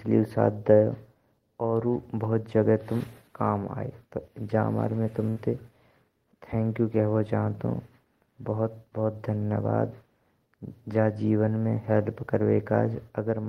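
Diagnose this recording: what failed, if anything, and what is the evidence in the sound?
A burst of packet loss at the network stage, 5.29 to 5.39 s: the receiver extends the last speech for about 66 ms, fading it down, then resumes with about 60 ms skipped. A spectrogram shows a frozen, dimming spectrum before an abrupt discontinuity.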